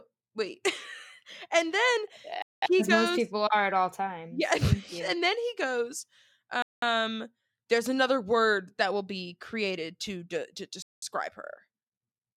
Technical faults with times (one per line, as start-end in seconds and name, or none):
2.42-2.62 gap between chunks
6.62-6.82 gap between chunks
10.82-11.02 gap between chunks